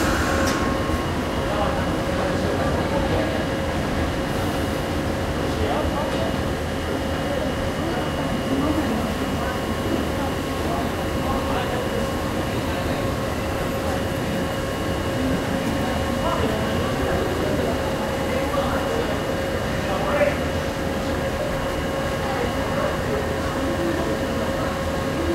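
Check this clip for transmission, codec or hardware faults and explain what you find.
Two short jumps are audible in the sound, at 13.55 s and 23.01 s, most likely a dropped buffer (overrun) each time. The audio skips ahead with no gap, losing around 10 ms and then around 15 ms, because samples were overwritten before being read and the surrounding audio was joined directly.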